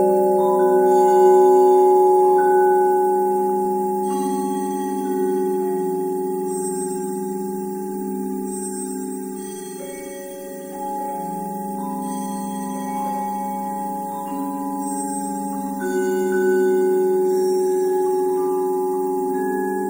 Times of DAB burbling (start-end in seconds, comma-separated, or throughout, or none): 3.65, 17.11-17.21